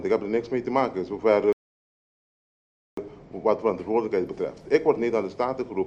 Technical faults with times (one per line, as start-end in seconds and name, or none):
1.53-2.97 playback stall